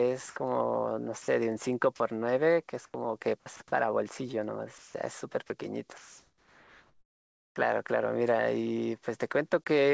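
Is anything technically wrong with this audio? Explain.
Yes, a voice detector on the sending side repeatedly cut the speech and filled the gaps with synthetic noise. The audio also passed through a wideband call path, consistent with G.722, whose band stops at 8 kHz.

Sound dropped by the voice detector occurs at 1.22–1.28 s, 1.96–2.00 s, 4.78–4.94 s and 5.48–5.50 s. The likely cause is the detector mistaking quiet speech for background and halting transmission, so the receiver substituted comfort noise. Each gap lasts about 20 to 160 ms. The speech briefly thins into a flat hiss, then resumes when the detector triggers again.

Sound chopped by the voice detector appears at 2.70–2.94 s and 3.40–3.60 s. In each stretch the detector likely toggled between sending and muting several times, so about 100 ms of the speech in each window was replaced by comfort noise. The result is choppy speech with soft edges missing.

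Comfort noise in place of the background runs from 5.98 to 7.56 s. During this pause, transmission likely stopped under discontinuous transmission, and the receiver generated noise roughly matching the background. The background sits about 49 dB below the loudest speech and becomes a featureless, steady hiss about 2 dB quieter than the real ambience, with its natural detail gone.

Onset clipped by the voice detector occurs at 7.53–7.56 s, at the end of that pause. The detector was likely slow to register that speech had restarted, so the first 30 ms were never sent and comfort noise covered them. The returning speech starts abruptly, without its soft attack.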